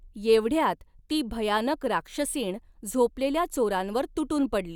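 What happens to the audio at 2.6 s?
Nothing goes wrong at 2.6 s; the speech runs through that moment intact, with no dropout, click, distortion or other audible fault.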